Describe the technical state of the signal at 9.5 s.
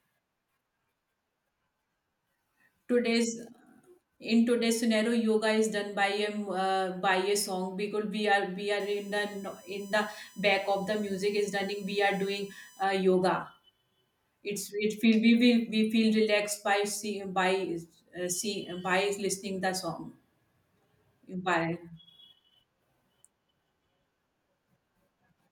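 At 9.5 s the speech carries USB whine, present from 8.80 to 12.84 s: a fixed-pitch tone built on 1 kHz, loudest at its 6 kHz harmonic, about 30 dB below the signal, as 1 ms bus-frame current pulses leak in through the power or ground.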